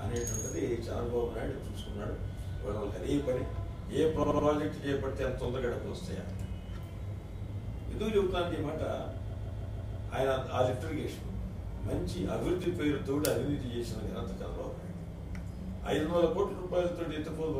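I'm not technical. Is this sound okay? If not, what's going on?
No, there are two kinds of fault.

Repeated frames at 4.22 to 4.46 s and 9.29 to 10.07 s: a short chunk of sound gets played again, like a record skipping. At 4.22 s a piece about 78 ms long repeats three more times, and at 9.29 s a piece about 157 ms long repeats five more times. You hear a stutter, and the clip runs about 1 s longer than it should.

Dropped buffer (overrun) at 5.44 s and 12.64 s: each is a jump where the sound skips forward a tiny amount, roughly a couple of milliseconds. Nothing goes silent. The recording just skips ahead. The likely cause is that the recording program briefly fell behind, so the hardware overwrote a small batch of sound before it was saved, and the two sides of the gap were joined directly.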